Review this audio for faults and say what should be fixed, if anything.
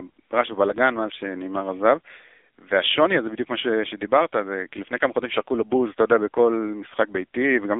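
The whole thing runs through an AMR narrowband mobile codec, heavily. Nothing gets past 3.7 kHz, the band sits at about 300 Hz to 3.6 kHz, and the buzzy, synthetic edge fits a low AMR-NB mode around 6.7 kbps. To prevent it, capture or route the call over a wideband path instead.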